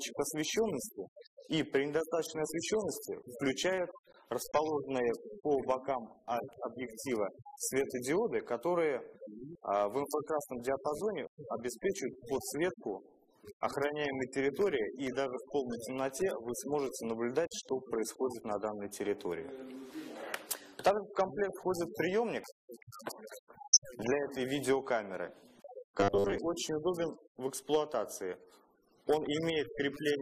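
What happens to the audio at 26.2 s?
From 26.00 to 26.38 s the audio turns into robotic sound from repeated short buffers: a rigid, metallic buzz pitched at 100 Hz that loosely tracks the underlying sound. The likely cause is audio arriving too seldom, so playback fills the gaps by looping the most recent 10 ms slice, which matches the 100 Hz buzz. Most of that span is repeated material rather than new audio, so the original content there is skipped.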